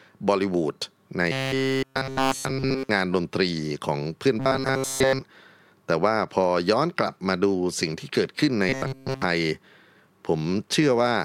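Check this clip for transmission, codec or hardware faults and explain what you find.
Robotic sound from repeated short buffers occurs at 1.32–2.89 s, 4.40–5.21 s and 8.69–9.22 s. Audio likely arrived too seldom, so a period of about 7.5 ms was looped, forcing a rigid 133 Hz metallic buzz onto the speech. The buzz fully covers the first two spans and most of the last.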